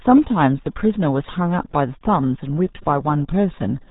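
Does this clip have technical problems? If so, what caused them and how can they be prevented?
Yes. The whole speech clip carries RealAudio 14.4 codec damage. Nothing above 3.8 kHz survives. The voice is muffled and gargly throughout. The heavy smearing fits an 8 kbit/s dial-up codec coding a crude speech model. To prevent it, encode from the original recording with a modern wideband codec at a higher bitrate.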